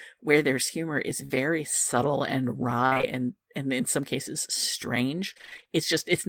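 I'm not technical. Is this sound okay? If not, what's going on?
No. Just after "where there's humor is", at 1.25 to 1.32 s, the speech briefly smears into a held buzz and skips ahead. This is a burst of packet loss: pieces of the audio never arrived over the network, and the gap was papered over.

From 2.86 to 3.05 s, after "subtle and", and again from 5.34 to 5.68 s, the voice turns choppy and robotic. This is repeated packet loss, where many small dropouts come close together and each is patched over.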